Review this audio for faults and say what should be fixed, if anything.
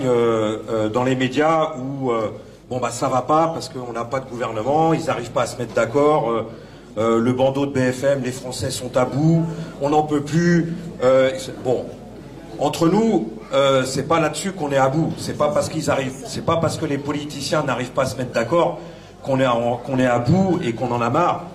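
Nothing stood out on listening, so there is nothing here that needs fixing.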